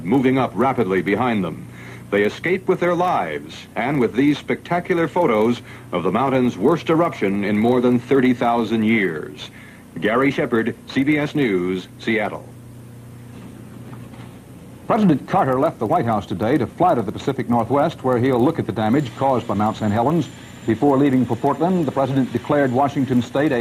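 Nothing in the audio stands out as a technical fault anywhere in it, so there's no problem to describe.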